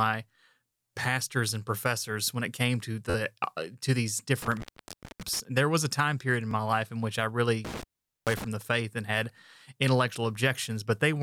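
At 3.1 s the playback device ran short of fresh audio and fell back on a repeated buffer, replaying its last block four extra times through 3.15 s. Each repeat lasts about 11.6 ms, which fits a 512-sample buffer, so the speech stalls into a brief buzzy stutter with hard joins rather than a clean skip. The stream then resumes with nothing apparently missing.

From 4.42 to 5.40 s an intermittent contact, a cable or plug briefly losing connection, breaks the signal path. Crackle marks the edges, and the line stays open for about 575 ms, leaving the speech gone and faint hiss underneath.

At 6.51 s the same buffer underrun recurs with a single extra play of that 11.6 ms block, heard as a short click-like hitch.

From 7.65 to 8.44 s the contact fails again, crackling in and out around a roughly 438 ms dropout filled with faint hiss.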